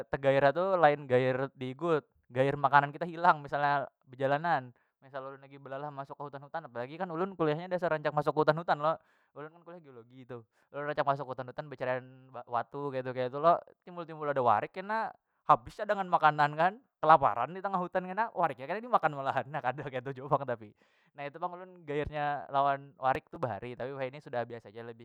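Speech, with a burst of processor overload crackle from 23.15 to 23.36 s: missed buffer deadlines skip audio in roughly 3 ms slices, leaving hard-edged gaps.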